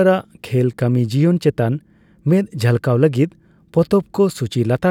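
No technical faults are audible in this recording.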